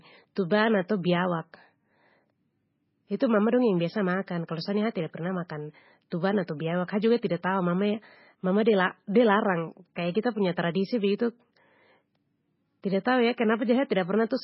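From start to finish the speech carries heavy MP3 compression, likely at a very low bitrate near 16 kbps. Nothing sounds above 5.6 kHz, and swirling, watery artefacts set it apart from simple filtering. Pre-echo appears at 0.35 s, 0.50 s and 6.10 s, the last just after "sa tida pernah makan". Codec noise smeared ahead of each sharp onset makes a brief hiss, unlike a click, which sits on the attack itself.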